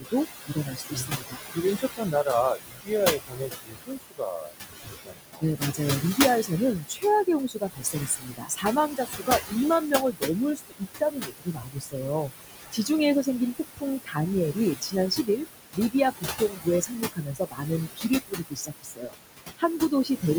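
Noise suppressor artifacts run the whole way through: the suppressor pulls the room noise down by about 17 dB in the gaps, then lets it swell back under the speech, so the background pumps. That's a lot to ask when the room noise sits only about 6 dB below the talker.

With noise that close to the speech level, the speech cut by the noise suppressor turns up repeatedly. It's brief at 0.0 to 0.13 s, then runs through most of 0.46 to 12.9 s with drops near 22 dB, adding up to around seven seconds of swallowed or faint speech. There are shorter patches at 13.23 to 14.18 s (about 21 dB) and 14.53 to 15.41 s (about 12 dB), then 15.73 to 20.24 s, about two seconds in total, dipping near 22 dB.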